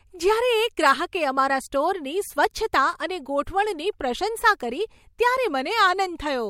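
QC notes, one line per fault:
No faults found in this speech clip. Nothing was heard that needs a QC entry.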